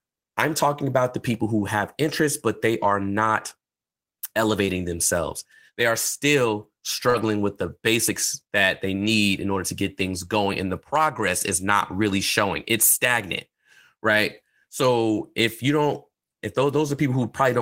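Short concealed packet loss at 4.65 to 4.69 s: audio arrived too late to decode, and the receiver filled 20 ms by extending the preceding sound, voiced parts from their pitch and unvoiced parts as shaped noise, before blending back. It is heard as a brief smear. The same repair recurs at 7.09 to 7.16 s, just after "are still" and before "with the basics that", filling 41 ms.

Lost packet rebuilt from error correction, overlapping the first gap, at 4.67 to 4.69 s: 20 ms was restored from a low-bitrate copy carried in the following packet, which fits one lost packet. Similar rebuilds cover 60 ms at 7.14 to 7.24 s, overlapping the end of the second concealment, and 40 ms at 9.02 to 9.08 s, after "the basics that they" and before "in order to get". There is no gap in these stretches, but they sound rougher and noisier.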